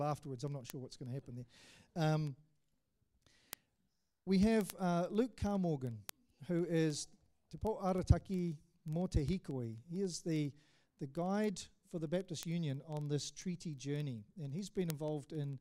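From 0.12 s to 15.58 s, the sound carries word clock ticks. They are sharp little clicks at a steady rate, about twenty per second, some louder than others. A digital link is being read by a device on its own clock, not locked to the sender. The two clocks drift apart by roughly 500 ppm. Each time they slip past each other, one sample is dropped or repeated. That happens about three hundred times across the clip.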